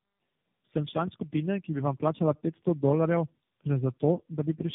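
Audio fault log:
Throughout: tandem speech coding. The call passed through three separate speech codecs in a row, fitting a chain like AMR-NB, G.729A and AMR-NB joined over G.711 links. Each re-encoded the previous coder's damaged output, so the speech sounds rough, muffled and warbly, with nothing above 3.7 kHz.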